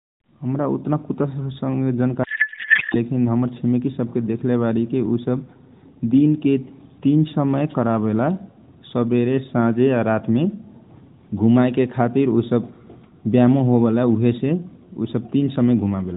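From 2.24 to 2.96 s, the speech breaks into a codec payload misread. For about 0.7 s the voice is replaced by garbled noise and warble that barely tracks what was being said. The AMR narrowband stream around it keeps its light band-limited coloring. The packing points to octet-aligned AMR frames being read as bandwidth-efficient ones, so every field lands in the wrong place. Clean speech returns with "लेकिन हमर छिमेकी सबके".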